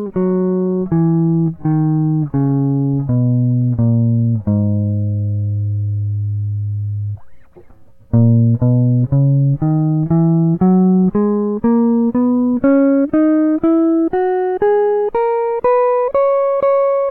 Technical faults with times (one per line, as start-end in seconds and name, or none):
0.00-4.88 time-stretched section